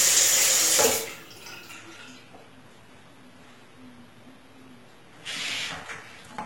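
At 1.73 s the audio drops abruptly to a lower-quality version and stays there to the end, the signature of an adaptive stream at a lower bitrate. With no gap or dropout, the treble dulls, which points to a switch from AAC-LC at 96 kbit/s to a low-rate HE-AAC stream around 16 kbit/s. On a spectrogram, content above about 11.8 kHz vanishes at that instant, leaving a hard ceiling, while the waveform runs on unbroken.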